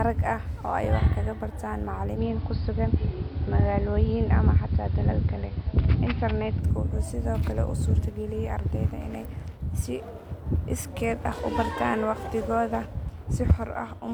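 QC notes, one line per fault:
2.12–6.66 s: digital radio blending to analogue. Digital reception drops and the sound cross-fades over 103 ms to the AM broadcast. The spectrogram shows a lowered treble ceiling, a faint hiss floor roughly 35 dB down, and an about 1 dB level step, all reversing at 6.66 s.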